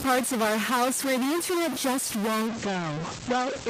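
A speech clip with distortion riding on the signal from start to finish, and with pauses filled by a hiss-like noise rather than falling silent. That pattern points to a stuck bit, likely a data line or converter bit held at a fixed value. About half the samples land off by that bit's weight, and small values near zero flip across it. Unlike clipping, the grit doesn't track loudness peaks, and unlike plain background hiss, it is tied to the waveform itself. At 2.48 s, right after "where the internet just", a call bitrate drop sets in and lasts to the end. The encoder falls from 64 to 12 kbps, and the audio band shrinks from 20 kHz to 8 kHz, so the sound turns muffled. It differs from packet loss because nothing drops out or repeats; the signal stays continuous but coarser and duller.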